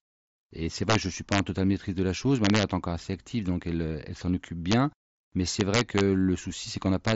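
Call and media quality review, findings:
Integer overflow: violent sign-flip cracks on loud peaks at 0.90–0.95 s, 1.32–1.39 s, 2.45–2.63 s, 4.72 s, 5.60–6.01 s and 7.08–7.12 s. Gain or mix stage wrapping instead of saturating; peaks about 1 to 4 dB over full scale jump to the opposite rail. Far harsher than clipping. Fix: saturating arithmetic or headroom before the summing stage.

Bluetooth mSBC headset codec path working as expected: band-limited, nothing above about 7.7 kHz, light graininess on louder speech, consistent with the wideband headset link at roughly 60 kbps.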